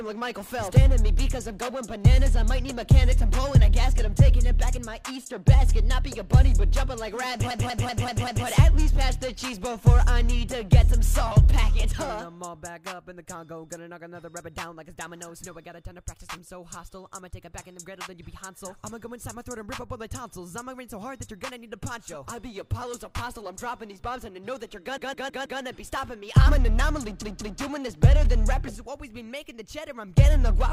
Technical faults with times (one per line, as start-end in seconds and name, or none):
7.50-8.46 repeated frames
24.97-25.61 repeated frames
27.21-27.60 repeated frames